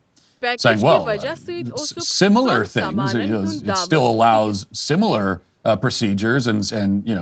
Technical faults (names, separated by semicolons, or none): none